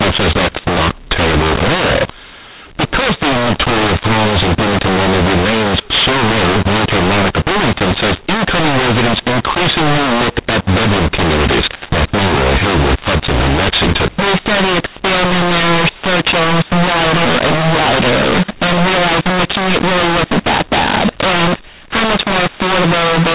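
A-law-coded G.711 telephone audio is being decoded as mu-law for the whole clip, a mu-law and A-law mix-up. Levels are scrambled, some too loud, some too quiet, so the speech sounds harsh and distorted, and pauses fill with lifted noise instead of silence.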